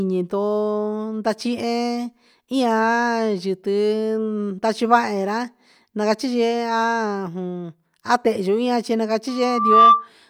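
From 9.28 to 10.08 s, a loudspeaker feedback squeal rises out of the speech. The microphone is re-amplifying the loudspeaker's output, and at 1.2 kHz the loop gain exceeds one. That tone swells over about half a second to roughly 10 dB above the voice. On a spectrogram it appears as a single bright horizontal line. In the waveform it shows as a growing envelope.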